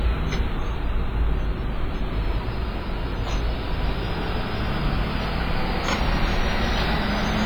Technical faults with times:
0.00-7.45 WMA compression

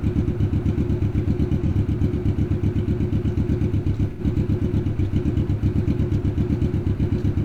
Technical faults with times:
1.67-1.73 AAC frame loss with concealment
4.10-4.21 AAC frame loss with concealment

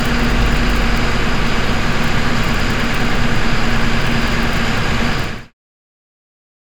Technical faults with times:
none

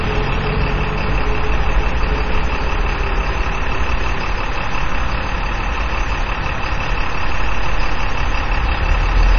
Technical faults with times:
0.00-9.38 MP3 compression

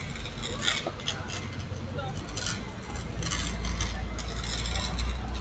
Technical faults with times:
0.00-5.40 noise suppressor applied to music or sounds

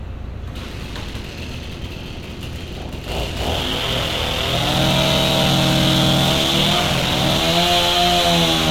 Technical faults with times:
0.66-7.41 block size mismatch (padded)

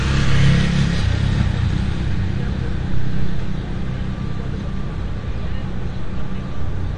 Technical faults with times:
0.00-6.97 AAC compression

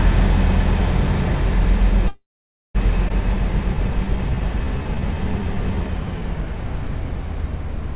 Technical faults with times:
2.08-2.77 call audio freeze
3.08-3.11 skip ahead
3.28-6.54 jitter buffer slow-down

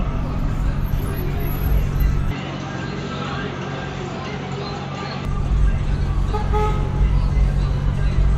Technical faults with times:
2.31-5.25 input switched to a poorer device

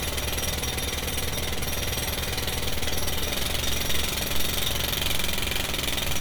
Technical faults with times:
none

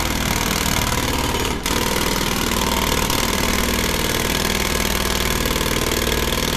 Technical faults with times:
none

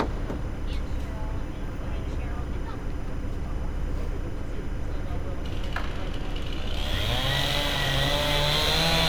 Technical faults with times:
0.00-9.08 timecode bleed

